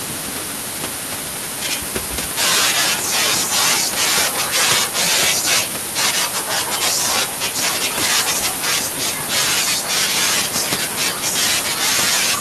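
Nothing goes wrong on the system side here; the only thing under the speech is the room's own background noise, sitting about 16 dB below it, and that's simply part of the recording.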